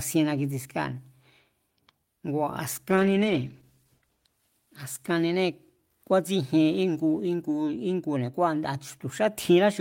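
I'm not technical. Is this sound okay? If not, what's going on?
No. From about 2.9 to 5.87 s there is a call bitrate drop. The connection briefly cut how much detail the call could send, so the speech turns rough and muffled, at its worst for about 1.15 s, then clears.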